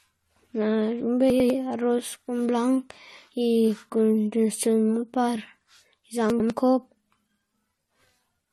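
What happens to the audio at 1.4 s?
Between 1.3 and 1.5 s, chunks play out of order: a 100 ms chunk arrives one chunk late, so the speech jumbles briefly across hard joins. Throughout, the audio stops at 12.5 kHz and mixes two distinct kinds of compression smear, likely transcoding between lossy codecs, consistent with MP3 followed by AAC-LC.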